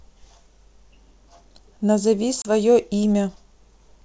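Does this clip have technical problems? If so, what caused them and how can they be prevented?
Yes. At 2.42 to 2.51 s, the speech drops out in a hard-edged hole of about 30 ms, then returns with some distortion. This is packet loss on an ADPCM call, here G.722 at 64 kbit/s. A few packets were lost and filled with silence, which threw the decoder's adaptive predictor and step size out of step with the sender's until they settled. Preventing it means using a jitter buffer with packet loss concealment that also resets the decoder state, and keeping the network path free of congestion.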